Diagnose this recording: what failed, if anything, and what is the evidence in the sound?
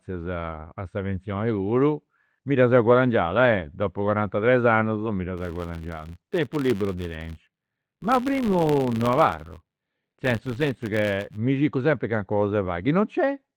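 A level-following buzz near 94 Hz runs 5.38 to 11.38 s, from "mi dda" to "circu sempri": a buffer-stage filter restarted on every block, fitting 512-sample blocks.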